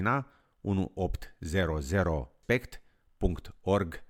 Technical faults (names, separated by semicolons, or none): damaged data in a compressed stream